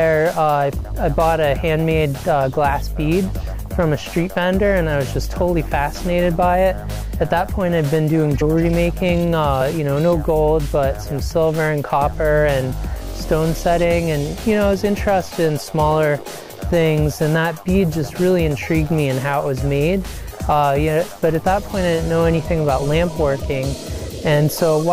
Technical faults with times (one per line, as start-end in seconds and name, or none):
8.40 compressed frames skipped